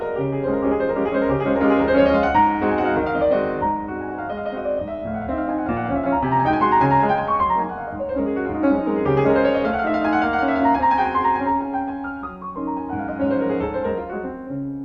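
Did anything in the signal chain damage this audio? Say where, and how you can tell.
No, nothing in this audio stood out as damage from any stage of the signal chain on listening.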